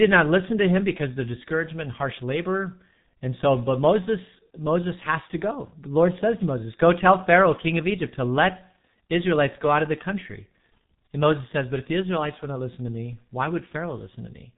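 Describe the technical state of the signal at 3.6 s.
At 3.6 s the speech is carrying the G.723.1 codec damage that runs through the whole clip. The band stops at 3.8 kHz, so everything above is gone and the sound is muffled. The coder works in 30 ms frames and refreshes its voice model slowly, so consonants smear and the tone turns hoarse. It's heavy damage, consistent with a bitrate of around 6 kbit/s.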